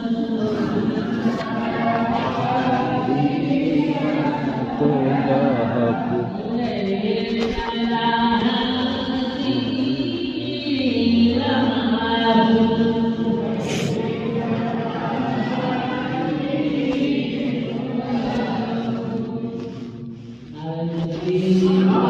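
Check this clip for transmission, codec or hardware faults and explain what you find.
No transmission, codec or hardware faults turn up in this clip.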